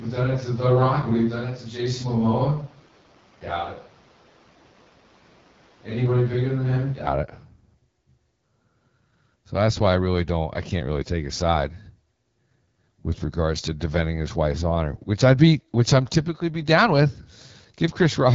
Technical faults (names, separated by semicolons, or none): AMR wideband (HD Voice) codec; switch to a distant microphone